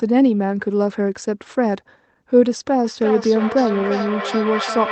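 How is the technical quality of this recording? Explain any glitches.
The recording has one clear fault: a feedback echo between two devices. It starts at 2.84 s and runs to the end. Each word comes back roughly every third of a second. The repeats reach about 6 dB below the speech. Two devices in the same room are on the call. One plays back what the other's microphone sends, and that microphone picks it up again. Neither echo canceller removes sound from the other device.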